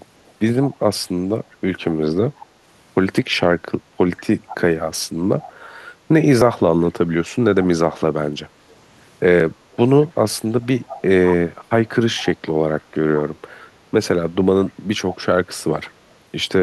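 Speech with two faults, likely caused upstream. An echo leak, likely from a far-end echo canceller failing to suppress its loudspeaker, returns a faint copy about 186 ms late, well below the voice, at 0.26–2.45, 4.48–5.53, 7.63, 8.71, 9.73–12.81 and 14.66–15.93 s. A dropped buffer (overrun), likely from samples overwritten before being read, splices the audio together with a skip of about 5 ms at 6.42, 9.40 and 10.59 s, the last longer, about 15 ms.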